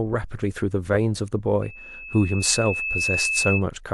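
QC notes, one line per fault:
1.62–3.65 s: loudspeaker feedback squeal, a 2.6 kHz tone swelling over roughly a second and a half to about speech level, as the mic–speaker loop gain exceeds unity there.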